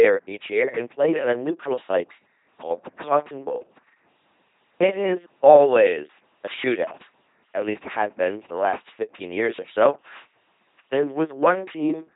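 The speech has been squeezed through an LPC-10 vocoder for its whole length, with the heavy damage you'd expect from a 2.4 kbit/s coder. Instead of carrying the waveform, the coder rebuilds each moment from a short all-pole filter excited by either a buzzy pulse train or noise, never a blend. The result is a buzzing, mechanical robot voice, with buzz and hiss replacing each other abruptly, and nothing above about 3.8 kHz.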